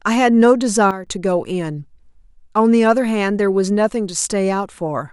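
A digital gain stage was likely switched without a ramp, stepping the level down by about 11 dB from one sample to the next in this speech clip. The result is a sudden gain jump at 0.91 s, where the speech and its background noise drop together at once rather than fading, and hold at the lower level until 1.07 s, when the level steps back up just as abruptly.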